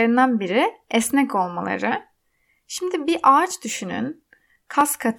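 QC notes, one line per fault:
0.92–4.81 s, clock drift buffer slips: a click recurs every 1.3 s, about four in all. Each is a small dropped or repeated block of roughly 50 samples, likely from two clocks disagreeing by around 700 ppm. The waveform shows abrupt step discontinuities, and the spectrogram shows thin, evenly spaced broadband vertical lines.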